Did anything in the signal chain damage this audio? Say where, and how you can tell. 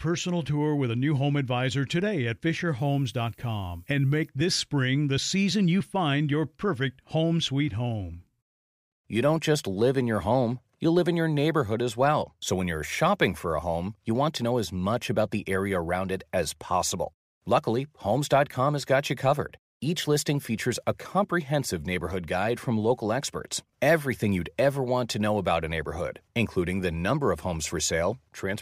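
Yes. From 2.79 to 4.29 s, between "home advisor today at" and "this spring the season", a thin, steady hiss sits under the speech and grows much stronger toward the top of the band. It is roughly 30 dB below the signal. The damage happened at sample-format conversion. This is low bit depth with noise shaping: the audio was requantised to 10 bits, and the rounding error was fed back so that the noise moved up into the high frequencies.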